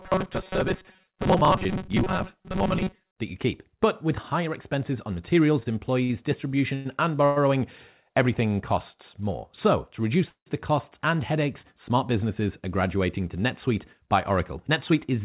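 From 0.01 to 3.11 s, new audio seems to have reached the output too seldom, so the gaps were most likely filled by replaying a very short stretch of the last audio over and over while the real audio went missing. The repeating block is about 5.3 ms long, which forces a steady buzz at 188 Hz. The result is robotic sound from repeated short buffers: the speech becomes a rigid, metallic drone that only loosely tracks it, with roughly half the material replaced by repeats.

Between 5.6 and 7.38 s, packets kept arriving later than they were needed, and the jitter buffer ran dry five separate times. Each time the receiver stretched the last sound to cover the wait, about 298 ms in all, with the longest hold lasting 112 ms. Nothing is lost, but roughly a sixth of that stretch is filler. This is repeated stalls (stutter): the speech drags and catches, hesitating several times before moving on.

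At 10.29 s, a call audio freeze interrupts the speech for 170 ms, likely because packets were held up in transit and the jitter buffer emptied. The receiver first continues the last sound, then lets it fade, leaving about 100 ms of silence before the audio resumes exactly where it stopped. Nothing is missing. A pause has simply been inserted into the flow.

From 14.3 to 15.2 s, the jitter buffer had built up more audio than it wants to keep, so the receiver trimmed the excess by cutting tiny pitch-period slices, around 50 ms in total. That jitter buffer speed-up makes the speech run at about 105% of normal speed while its pitch stays unchanged, so the end of the clip sounds slightly hurried. Throughout, the call path's G.711 mu-law coding leaves nothing above 4 kHz.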